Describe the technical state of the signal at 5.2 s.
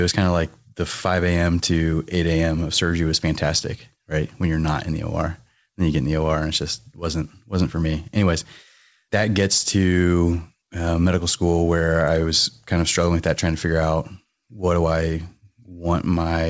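At 5.2 s the speech is intact, with no dropout, glitch or other fault, only the normal call-path processing that stops the sound at 8 kHz.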